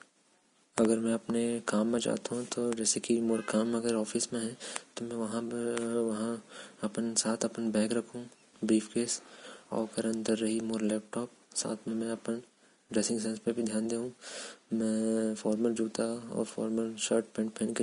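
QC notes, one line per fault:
Throughout, Vorbis compression: the speech has nothing above 10.5 kHz and a plainly audible hissy, grainy texture in the upper range, with roughened tones and softened consonant attacks. This is likely the work of a Vorbis encoder running at low quality. It drops the top band and quantises the remaining treble so coarsely that fine detail is replaced by noise of similar energy, damage that points to a bitrate somewhere around 36 kbps.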